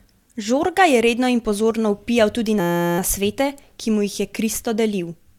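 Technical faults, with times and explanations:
2.60 to 2.98 s, system hang loop: right after "in pozorno vpijal tudi", the system or its audio driver stalled while the sound hardware kept replaying the same 5.8 ms slice of its ring buffer, which fits a 256-sample buffer. That slice repeats 66 times at 172 Hz, so instead of speech there is a steady, pitched buzz at that rate. Speech resumes with "nasvete ki", and next to no audio appears to be missing.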